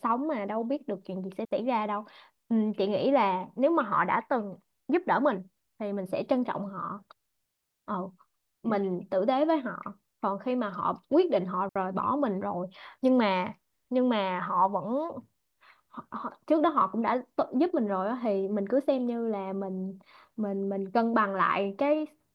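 A speech recording with two digital wireless dropouts, at 1.45 s and again at 11.69 s. Each one is a clean hole of near silence, roughly 62 ms and 67 ms long, with no crackle or noise burst on either side. That's the receiver losing too much of the data stream and muting itself with a very fast fade instead of letting garbage through, so you just get a brief gap.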